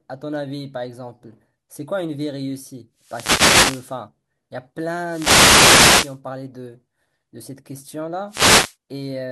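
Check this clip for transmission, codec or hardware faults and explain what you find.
Three wireless microphone noise hits break into the speech, at 2.98 to 4.01 s, 5.04 to 6.20 s and 8.27 to 8.76 s. Each is a burst of static or swish lasting roughly half a second to just over a second. The analogue FM radio link from the microphone fades when reflected paths cancel the direct signal. The receiver's own noise then rises through the quieting, and at the deepest points it crackles over the voice.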